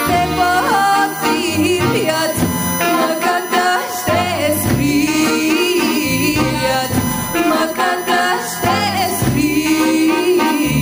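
From start to finish there's a USB whine sitting under the sound: a fixed-pitch tone built on 1 kHz, with its strongest component way up at 15 kHz. That's the bus's 1 ms frame rate leaking into power or ground. It sits around 15 dB below the signal.

Running the whole way through as well is gain pumping. The gain swings by something like 10 dB, leaving everything sounding squashed. The likely cause is input gain set far too high, with a fast limiter clamping down on every peak.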